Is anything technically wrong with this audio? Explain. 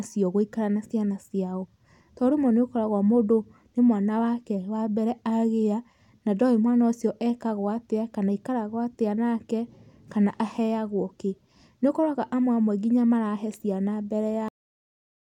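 Yes. A cut-off end at 14.48 s, right after "nginya marahe ciana mbere": the final buffers were never written, so the speech stops mid-sound and drops straight to digital silence without decay.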